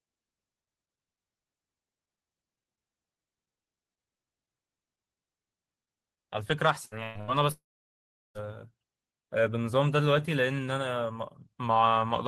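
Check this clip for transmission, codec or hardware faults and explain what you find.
Transmission faults are present: a cluster of packet-loss bursts followed by a longer network dropout, all in the speech between about 6.8 and 8.4 s.

Burst of packet loss, at 6.85–6.94 s, 7.03–7.18 s and 7.21–7.31 s: runs of packets went missing, about 60, 120 and 60 ms worth, and the receiver filled each gap by extending and fading the preceding sound. Each lands as a brief buzz or hiss, then speech resumes with a piece skipped.

Long network dropout, 7.52–8.38 s: roughly 840 ms of audio never arrived, likely from a stall in the network path. Concealment carries the last sound only briefly before it dies away, leaving about 0.75 s of silence before speech returns further on.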